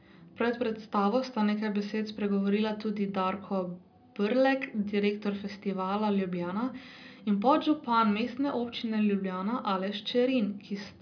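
Nothing in the speech stood out as a technical problem on listening.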